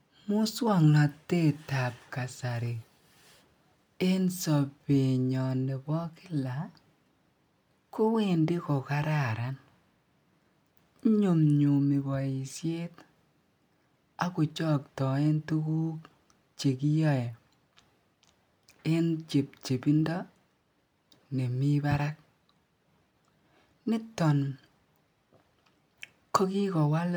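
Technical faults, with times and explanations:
Nothing stood out as a technical fault on listening to this speech recording.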